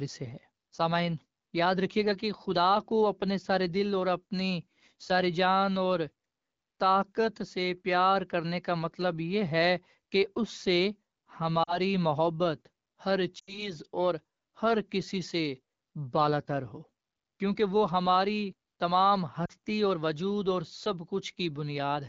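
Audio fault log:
11.64–11.78 s, 13.39–13.74 s and 19.45–19.53 s, lost AMR speech frames: corrupted frames make the decoder repeat its last good pitch and vocal tract settings at falling gain, so speech smears and dips, about 40, 80 and 40 ms lost, over light HD Voice (AMR-WB) coding.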